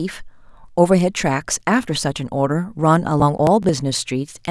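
From 3.2 to 3.69 s the speech breaks into a burst of processor overload crackle. The processor fell behind and missed a run of buffer deadlines, around seven of them, with spacing that fits buffers of roughly 10 ms. Each missed buffer was simply skipped, leaving short hard-edged gaps that stack into a gritty tearing over the sound. Unlike a single dropout, it is a dense cluster of tiny breaks, and it stops cleanly once the load passes.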